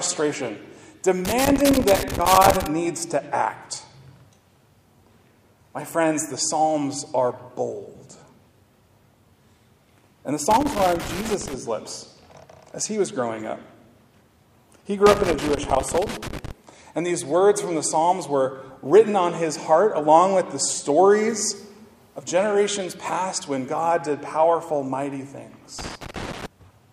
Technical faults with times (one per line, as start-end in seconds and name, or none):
1.25-2.67 loose connector crackle
10.51-11.53 loose connector crackle
15.06-16.51 loose connector crackle
25.78-26.46 loose connector crackle